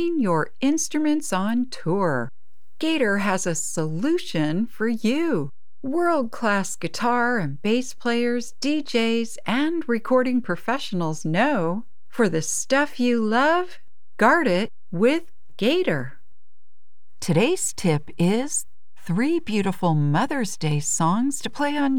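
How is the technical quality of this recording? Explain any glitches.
The recording carries one technical fault, present throughout. A DC offset of about -30 dBFS shifts the whole speech waveform off zero, eating headroom and adding steady energy at 0 Hz, unlike hum or rumble, which oscillate and can be heard.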